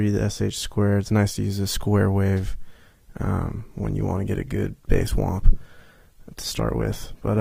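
At 2.78 s the quality changes abruptly, with codec artefacts rising and no gap, through to the end. This is an adaptive stream at a lower bitrate, switched because the connection slowed; the change fits Opus dropping from 64 to 16 kbit/s.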